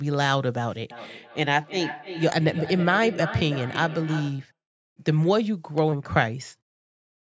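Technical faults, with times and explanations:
0.91–4.53 s, feedback echo between two devices: a second device in the room replays the call, and this microphone picks that playback up again. Its own echo canceller can't remove sound from another device. The sound returns at a steady lag of roughly 300 ms, peaking at about 12 dB below the direct speech. On the waveform each burst has a fainter copy trailing it. On the spectrogram, displaced ghost copies of each harmonic pattern appear, thinner and smeared.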